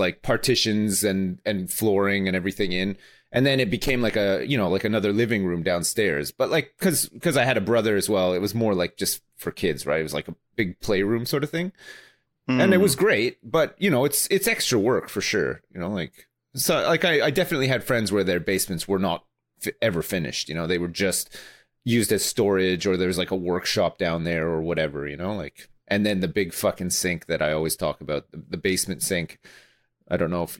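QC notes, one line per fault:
No fault to note.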